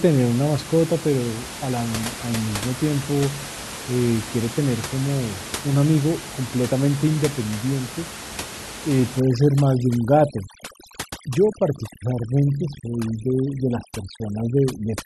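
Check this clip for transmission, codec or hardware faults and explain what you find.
Overdone noise removal runs from 9.20 s to the end of the clip. A noise reduction stage is clamping too hard. Any frequency band that sits close to its noise estimate is pulled far down or switched off. With the room noise only about 12 dB below the speech, the quieter parts of the voice fall inside that estimate and are stripped away too. The background drops and breaks up into twinkling artefacts.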